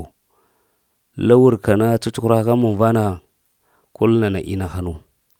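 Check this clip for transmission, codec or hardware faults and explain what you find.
No faults detected.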